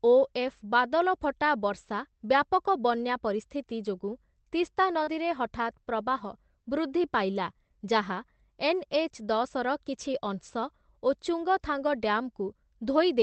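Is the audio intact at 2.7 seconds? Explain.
No. At 2.67 s, just before "ବନ୍ୟା ପରିସ୍ଥିତି", there is a lost packet rebuilt from error correction, which fits a single lost packet. The decoder filled about 20 ms with the lower-bitrate Opus copy carried in the following packet, so nothing drops out, but that instant sounds briefly rougher and grainier. On a waveform there is no gap or flat line. On a spectrogram, the harmonics in that thin slice look smeared and noisier, within the call's 8 kHz band.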